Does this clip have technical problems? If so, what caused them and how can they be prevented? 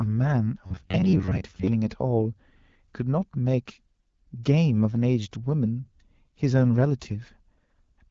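Yes. From 0.66 to 1.68 s, robotic sound from repeated short buffers gives a rigid buzz near 94 Hz, likely from audio arriving too seldom so about half the sound is a repeated ~10.7 ms segment. A spectrogram shows evenly spaced harmonic stripes at 94 Hz multiples, and the waveform shows identical repeating cycles. A larger jitter buffer or more reliable audio delivery would prevent the playback from running dry.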